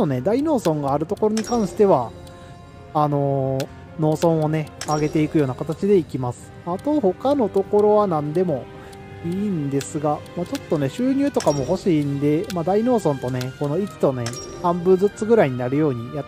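No technical faults can be heard anywhere in this audio.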